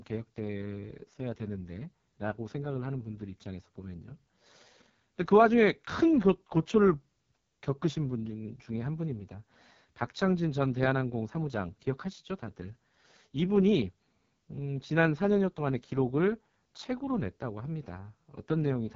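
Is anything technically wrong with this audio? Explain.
Yes. Throughout, an AMR wideband (HD Voice) codec starves its vocal tract model of bits, consistent with its lowest 6.6 kbit/s mode, leaving speech rough, raspy and empty above 7.5 kHz.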